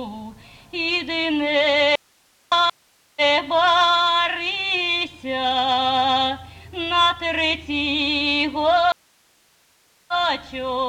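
The audio has three breaks. From 1.96 to 2.52 s there is an audio dropout to a faint residue. About 0.56 s of signal vanishes at once. Only hiss remains, roughly 40 dB below the normal level. The cut is abrupt, not a pause or a fade. The likely cause is a lost source while the downstream path stayed live, so its noise floor shows through. A stream reconnect follows from 2.70 to 4.00 s. The player goes silent for 0.47 s. A fresh decoder then starts up. The sound resumes 0.84 s earlier than where it broke, so that stretch repeats. That fits a server resending a buffered burst. A second stream reconnect runs from 8.92 to 10.13 s. This silence lasts 1.16 s. Playback then picks up roughly 0.7 s later, so that part of the audio is skipped.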